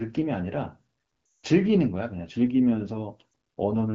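From 1.26 to 1.46 s, lost AMR speech frames make the speech drop to near silence within two frames. This fits a run of about nine 20 ms frames. The decoder repeats its last good settings at falling gain. At 3.31 s, a single lost frame causes a brief dip.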